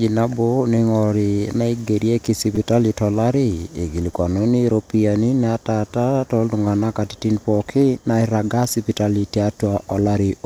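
Speech with a repeated buffer at 2.55 s and 4.14 s: a 5 ms block replays three, then two extra times, a brief buzz showing as identical waveform cycles with vertical spectrogram seams.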